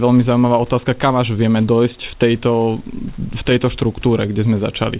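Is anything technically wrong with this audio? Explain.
No, nothing here is technically wrong.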